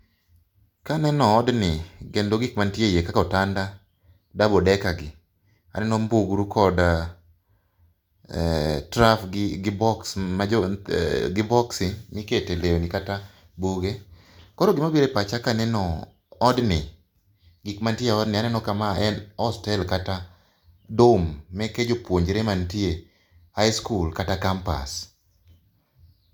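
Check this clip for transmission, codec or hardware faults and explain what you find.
No transmission, codec or hardware faults are audible anywhere in this speech recording.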